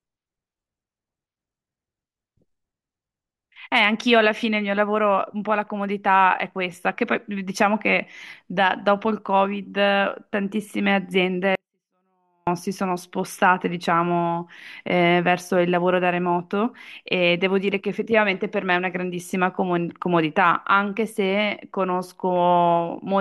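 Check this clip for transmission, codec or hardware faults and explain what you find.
One fault is present, a 24-bit alignment error that leaves the speech too quiet. From 11.55 to 12.47 s, the level drops by about 48 dB at once. Samples packed in the low bytes of 32-bit words are read as full 32-bit values. The speech stays clean but is almost inaudible.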